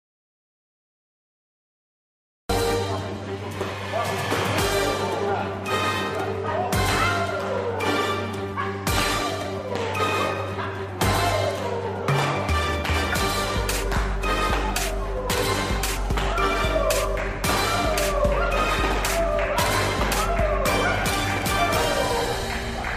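From the very start until about 2.49 s there's an audio dropout to silence: dead silence, no room tone at all, and then the sound snaps in already mid-flow. Most likely the input was lost, say a disconnected device or a mute, while recording carried on.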